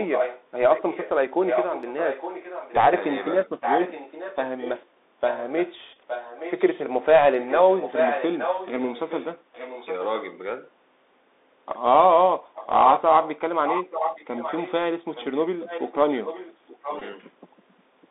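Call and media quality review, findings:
Bluetooth CVSD headset codec, throughout: band limited to 300 Hz to 3.7 kHz, nothing above on the spectrogram; scratchy s sounds, slope-overload distortion on loud peaks, granular hiss floor across the band.

Echo leak at 0 to 2.73 s, 3.61 to 6.84 s, 7.4 to 10.05 s and 12.54 to 17.18 s: a copy of the speech about 10 dB down, 0.87 s late. The spectrogram shows repeated, fainter harmonic patterns; likely a loudspeaker-side echo canceller letting residue through.

Bluetooth headset packet repeated at 5.93 to 5.97 s and 17.00 to 17.02 s: short buzz near 267 Hz as the last packet is decoded again every 3.75 ms. The waveform shows short periodic repeats, about six and four lost packets.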